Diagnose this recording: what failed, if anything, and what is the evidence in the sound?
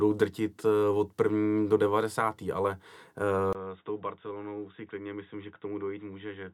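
At 3.53 s the speech goes dull and boxy until the end, after a 20 ms gap. Nothing remains above 3.8 kHz. The level drops about 10 dB, with a faint new noise floor. This points to the capture stage: the input likely switched to a poorer device.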